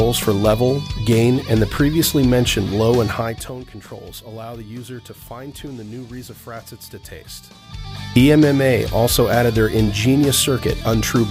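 From 3.07 to 3.58 s, a level drop of roughly 15 dB is applied in unsmoothed 3 dB jumps, about ten per second, causing zipper noise. Each abrupt gain step leaves a small click, so a quick ticking rides on the sound as it fades down.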